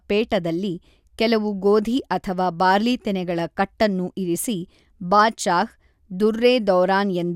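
Nothing here calls for a fault report, since the speech runs along without any technical problem showing up at any point.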